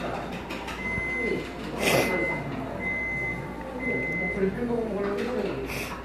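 Listening through the recording of everyday sounds, nothing stood out as a technical fault at any point.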